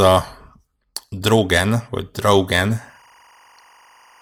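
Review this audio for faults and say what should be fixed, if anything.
From 2.77 s to the end, a faint, steady chirping warble sits behind the speech, roughly 35 dB below it. This is timecode bleed. Linear timecode running at 24 frames per second has leaked in from a neighbouring track or cable. Its square wave flips between two tones near 1 and 2 kHz as the bit pattern changes, which produces that twittering texture. To prevent it, route timecode away from audio lines and tracks, and use shielded, separated cabling.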